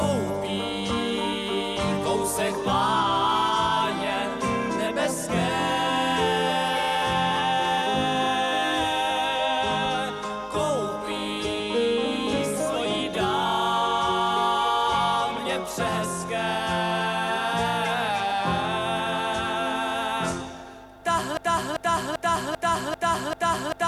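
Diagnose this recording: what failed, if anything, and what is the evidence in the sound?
A broken-record loop starts at 21.37 s and runs to the end. A 0.39 s fragment repeats exactly, six times over. The likely cause is a stalled playback or stream buffer resending its last block. The audio due in that stretch is lost.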